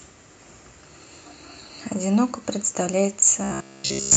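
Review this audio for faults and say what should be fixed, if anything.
Short concealed packet loss occurs at 1.67 to 1.71 s. About 20 ms of speech never reached the decoder in time, and the receiver bridged the hole by extending the preceding sound before crossfading back into the real signal. It is heard as a brief smear or wobble. A larger jitter buffer or forward error correction on the Opus stream would prevent it.

Robotic sound from repeated short buffers runs from 3.44 s to the end of the clip. The speech turns into a rigid metallic buzz at 66.9 Hz that still loosely follows the syllables. The cause is likely audio arriving too seldom, so the software repeats a short slice, about 15 ms long to match that buzz, for most of this stretch. A spectrogram shows evenly spaced vertical striations at about 67 Hz, and the waveform shows identical repeating blocks. A steadier audio thread or larger device buffer would stop the underruns.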